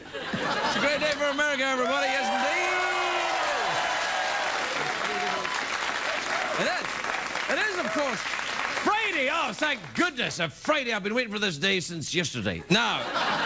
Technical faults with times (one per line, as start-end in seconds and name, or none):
none